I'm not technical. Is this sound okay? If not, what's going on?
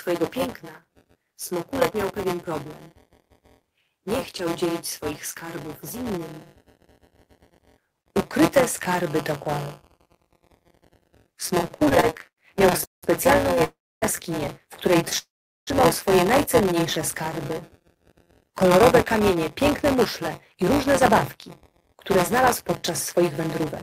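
No. Several problems can be heard.

Throughout the clip there is buffer tearing. A steady robotic buzz at about 172 Hz rides on the sound, which fits a 256-sample buffer. A small slice of each buffer repeats old audio.

From 11.57 to 13.62 s there are repeated stalls (stutter). The sound catches 21 times, the longest for 185 ms, and drags without losing anything.

There are two call audio freezes, at 13.64 to 14.04 s and at 15.18 to 15.69 s. The sound stops briefly, then resumes where it left off. Late network packets are the likely cause.

From 16.97 to 18.82 s there is a jitter buffer slow-down. The sound plays at 95% speed, drawn out, but at the same pitch.

From 20.54 to 23.61 s there is a jitter buffer speed-up. The sound runs at 104% speed, with the pitch unchanged.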